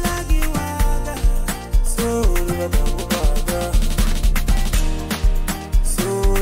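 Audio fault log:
1.17–1.20 s, damaged data in a compressed stream: a brief glitch in the sound. Corrupted bytes there made the decoder misread its frames, lose sync, and skip forward to the next valid frame header before resuming playback.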